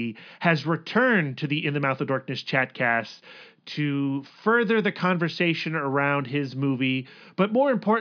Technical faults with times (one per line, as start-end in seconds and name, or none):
none